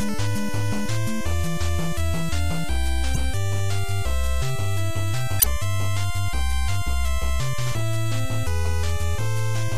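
From start to finish there's a DC offset: the whole waveform sits shifted off zero, so you won't hear it, but it eats headroom and shows up as steady energy at the very bottom. Also throughout, the sound is plainly watery and swirly, with smeared attacks, most likely MP3 compression at a low rate, something that fits roughly 64 kbps. Then there are two short glitches of damaged data in a compressed stream, at 3.12 to 3.17 s and 5.37 to 5.46 s. Each time the decoder misreads broken frames and hunts for the next header, giving a brief glitch.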